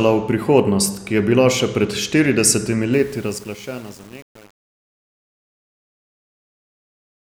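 From about 2.93 s to the end at 7.32 s, the speech turns grainy and rough as it fades out. This is truncation distortion on a fade. The fade, which starts around 3 s, was computed without dither and with too little resolution, consistent with roughly 7 bits. As the level drops, the waveform collapses onto a few coarse steps.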